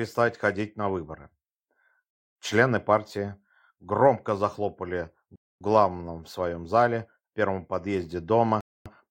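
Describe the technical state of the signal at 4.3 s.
At 4.3 s the signal is intact, with no audible fault at that point.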